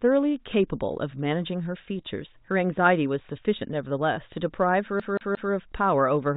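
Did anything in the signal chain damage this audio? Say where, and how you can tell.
Yes. At playback, the CD is stuck on one turn: a scratch keeps throwing the laser back a track, so from 5.00 to 5.53 s the same 177 ms of speech plays three times, each jump marked by a brief mute, beneath the narrow G.711 telephone band.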